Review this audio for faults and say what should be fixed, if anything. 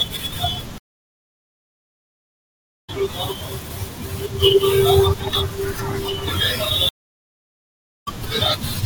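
Stream reconnect at 0.78–2.90 s (about 2.1 s of silence) and 6.89–8.08 s (about 1.2 s). Each time the connection dropped and a fresh decoder restarted mid-stream, so the speech resumes roughly a second and under a second later. That skip ahead is what separates it from a simple dropout, which picks up where it stopped. A larger client buffer and a more stable network link would prevent these breaks.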